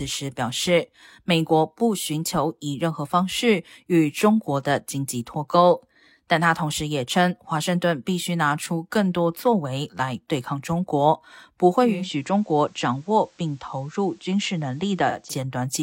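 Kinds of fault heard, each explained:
Digital radio blending to analogue: the hybrid receiver lost its digital stream at 11.78 s and cross-faded over about 328 ms to the station's FM broadcast, returning at 15.36 s. While on FM, the speech drops by about 2 dB, and a faint broadband hiss rises to sit roughly 35 dB below the speech.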